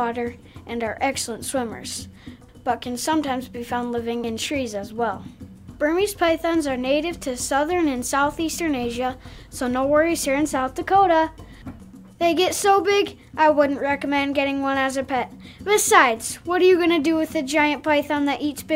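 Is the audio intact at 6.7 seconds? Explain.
Yes, the audio at 6.7 seconds is intact, with no dropout, click, distortion or other fault at that point.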